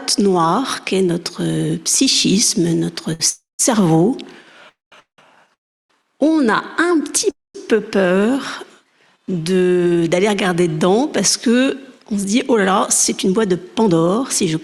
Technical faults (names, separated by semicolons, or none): short stall from a late packet; call audio freeze; jitter buffer speed-up